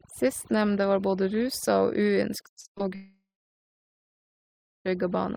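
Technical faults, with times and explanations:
Throughout: overdone noise removal. The noise reduction is set too aggressively, so frequency bands sitting near the noise estimate are pulled far down or switched off, taking quieter parts of the speech with them. The background drops and breaks up into twinkling specks.
2.53 to 2.81 s: repeated packet loss (robotic sound). Five short gaps, the longest about 59 ms, hit this 0.28 s stretch, and over half of it is concealed by extending the previous sound. The rapid succession of patched holes makes the speech choppy, with fragments missing.
2.95 to 4.87 s: long network dropout. Nearly 1.9 s of audio never plays. The receiver briefly continues the last sound, which decays into a fading buzz or hiss, and then about 1.6 s of silence remains before the speech resumes further on, minus the lost portion. A sustained network interruption is the likely cause.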